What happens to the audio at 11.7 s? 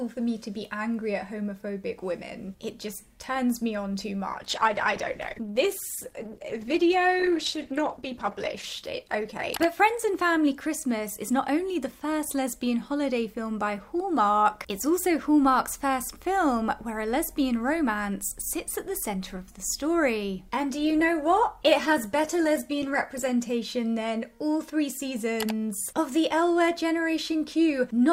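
A call bitrate drop runs from 4.37 to 11.83 s: the encoder starved of bits, which fits a fall to roughly 13 kbps, codes coarsely and loses highs, leaving muffled, watery sound until recovery.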